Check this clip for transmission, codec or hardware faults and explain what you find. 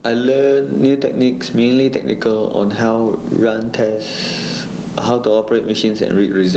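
One fault runs through the whole clip: gain pumping. The gain swings by roughly 20 dB, dropping under each loud syllable, most likely because the input gain is set far too high and a fast limiter or compressor clamps down on each peak, which flattens the speech. A noise gate would instead mute the pauses.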